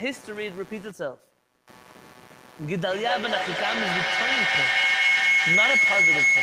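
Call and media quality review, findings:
Computer activity noise, throughout. A buzzing, chirping pulse at around 150 Hz, roughly 20 dB under the speech, rising and falling with machine activity, not with the talker. Processor, graphics or mouse load shifts the audio circuit's shared ground.

Feedback howl, 2.87 s to the end. A tone near 2 kHz builds and pulses about every 200 ms, peaking about 8 dB above the speech. Two devices in one room are on the call. The mic-to-speaker loop gains level each pass and is never broken.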